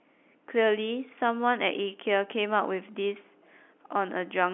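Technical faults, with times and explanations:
No technical faults can be heard in this speech. It comes through G.711 telephone coding, which holds the sound to the phone band of about 250 Hz to 3.4 kHz with nothing above 4 kHz, and any quantisation noise beneath it stays faint.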